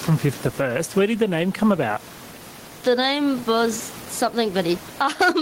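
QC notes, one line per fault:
Throughout, gain pumping: the gain swings by around 15 dB, so loud and soft syllables land at nearly the same level and the speech sounds squashed. The likely cause is input gain set far too high, with a fast limiter clamping each loud sound. A waveform shows loud and soft passages at nearly even height; a spectrogram shows the room noise, about 30 dB under the speech.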